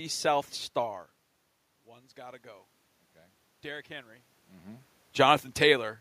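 From 1.84 to 2.74 s there is automatic gain rising. The input level had fallen by about 18 dB. The gain control responded gradually, adding about 4 dB over 0.9 s. The voice and the room noise swell together as it climbs.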